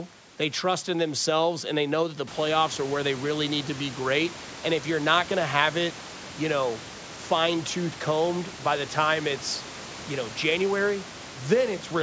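No technical faults can be heard in this speech clip.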